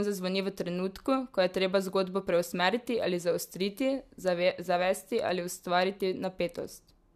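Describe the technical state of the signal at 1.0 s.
At 1.0 s the speech has a dull, capped top end, with nothing above 14.1 kHz, running through the whole clip. The likely cause is low-bitrate audio saved at a high bitrate: a lean earlier encode set that ceiling, and the later MP3 pass cannot restore what was removed.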